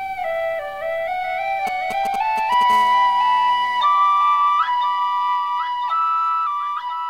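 From 1.67 to 2.63 s, a 2G mobile phone close to the recording chain is signalling, sending only brief groups of radio bursts rather than a continuous transmission. The audio circuitry rectifies those pulses, so the result is GSM signalling bursts: a galloping dit-dit-dit of short raspy buzzes at 217 Hz, sitting roughly 10 dB below the sound and bearing no relation to it.

From 2.70 to 3.83 s, a 2G phone nearby is in a call and transmits steadily at its burst rate of 217 per second. Rectification of that regular pulse train turns into GSM phone buzz, a hard, continuous rasp at 217 Hz rich in harmonics, at about 22 dB below the sound, quieter than the earlier bursts but unbroken.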